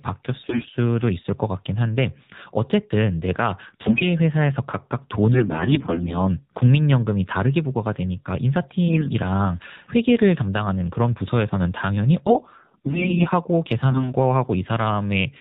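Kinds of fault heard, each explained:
AMR narrowband mobile codec: The whole recording went through the AMR-NB mobile speech codec at a low setting, and the damage is plainly audible. The codec samples at 8 kHz and rebuilds the voice from a vocal-tract model fed with sparse pulses, so nothing above 4 kHz survives. The speech sounds muffled and thin, with a buzzy, synthetic edge throughout, which fits one of the lower modes, around 7.4 kbps.
AMR bit errors: Over a weak link, the lightly protected bits of some AMR frames arrived corrupted while the check on the key bits still passed, so the decoder misplaced its excitation pulses and misread the fine pitch, gain and spectral values. The voice keeps its rough pitch and loudness but turns hoarse, scratchy and gargly at 0.44–0.69 s, 3.68–4.06 s, 5.34–6.16 s, 8.88–9.10 s, 12.26–13.27 s and 13.90–14.13 s. The first and fourth bursts are the harshest.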